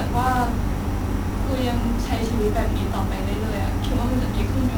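Speech heard through 1-bit DFPWM compression for its whole length: broadband fuzz and crackle bury the treble in hiss. Unlike steady tape hiss, the noise rides with the signal, fitting a heavy, roughly 48 kbps one-bit stream.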